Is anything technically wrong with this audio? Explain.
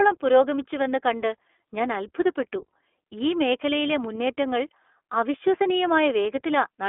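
Yes. The speech runs through the iLBC codec for the whole clip. It is confined to a telephone band of roughly 300 Hz to 3.5 kHz, and the codec damage is plainly audible as a rough, slightly synthetic texture. That fits iLBC's 15.2 kbps mode, which codes each 20 ms frame independently.

From 0.85 to 0.87 s there is a lost iLBC frame, which sounds like a missing 20 ms packet. The decoder fills the gap by repeating the last pitch cycle blended with noise, giving a brief held, buzzy vowel. Because frames stand alone, clean decoding resumes immediately.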